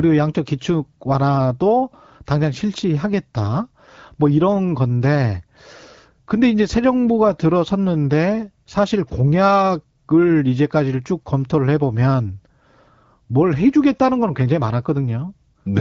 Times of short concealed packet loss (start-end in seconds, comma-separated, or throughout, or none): none